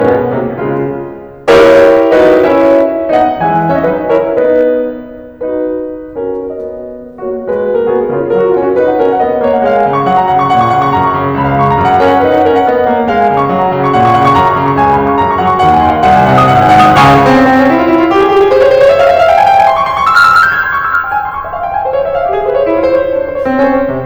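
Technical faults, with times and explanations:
Throughout, hard clipping: the music is driven about 12 dB past what a stage can pass, flattening roughly one sample in twenty-five, so loud passages turn into harsh fuzz.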